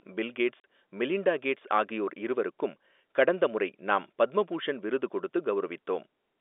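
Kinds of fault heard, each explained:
Packet loss filled with silence: at 0.6 s the speech drops out for 40 ms with hard edges, which fits two lost 20 ms packets.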